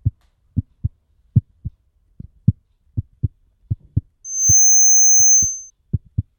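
A loudspeaker feedback squeal breaks into the audio at 4.24 s and holds until 5.70 s. It is a single piercing tone near 6.3 kHz. It swells up over roughly a third of a second and settles about 5 dB above the rest of the sound. A microphone was picking up the loudspeaker it fed. Around 6.3 kHz the loop gain went above one, so that tone kept reinforcing itself.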